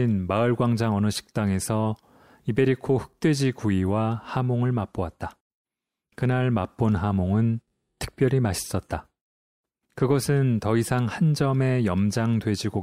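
Nothing in this recording trips up the ear at any point; it just runs along with no technical faults to report.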